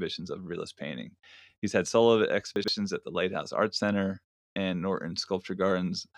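At 2.56 to 2.68 s, chunks play out of order. One 40 ms chunk arrives two chunks late. The speech jumbles briefly, with three hard joins.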